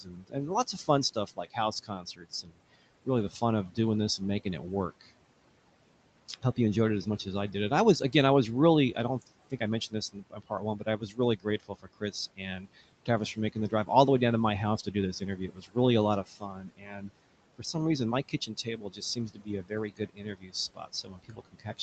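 Noise suppressor artifacts run through the whole clip. The suppressor pulls down the bands it judges to be steady background by about 18 dB, frame by frame, so the room noise sinks in the pauses and comes back up underneath the speech. On a spectrogram, the gaps between phrases look almost empty, while a grainy noise floor shows up under each burst of speech.

Speech cut by the noise suppressor occurs in four stretches: 0.02 to 5.08 s, 8.95 to 13.9 s, 14.85 to 17.75 s and 18.29 to 21.82 s. The suppressor mistook parts of the speech for noise and turned them down along with the background. The drops reach about 18 to 19 dB and add up to about a second and a half in the first stretch and about a second in the second and third. Soft consonants and word endings sound swallowed. In the waveform, syllable tails collapse abruptly, and on the spectrogram the faint high-frequency consonant energy is missing in patches, within a band that stops at 8 kHz.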